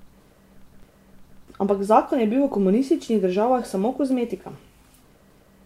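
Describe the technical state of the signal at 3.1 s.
At 3.1 s, word clock ticks (0.82–5.22 s): an unlocked receiver slips one sample about once a second, giving sharp ticks spaced evenly, unlike random clicks.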